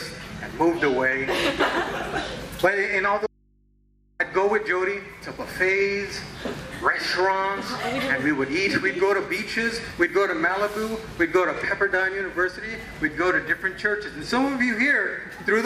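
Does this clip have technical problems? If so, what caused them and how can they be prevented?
Yes. An audio dropout to a faint residue runs from 3.27 to 4.20 s. The sound cuts off abruptly for about 0.93 s, leaving only mains hum roughly 35 dB below the signal. The path stayed live while the source was likely disconnected, as at a loose cable or connector. Securing and checking connectors before recording would prevent it.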